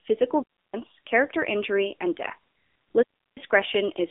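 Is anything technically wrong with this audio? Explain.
Yes. The speech runs throughout through an AMR narrowband mobile codec. Nothing above 3.7 kHz survives, and the band sits roughly between 250 Hz and 3.6 kHz. The sound is buzzy and synthetic. That fits a low bitrate around 7.4 kbps. At that rate the coder models the vocal tract with only a few pulses per short subframe.

There are two digital wireless dropouts. One runs from 0.43 to 0.74 s, and the other from 3.03 to 3.37 s. Each lasts about a third of a second. Too much data went missing, so the receiver muted quickly. Each leaves a clean hole of near silence, with no noise burst at either edge.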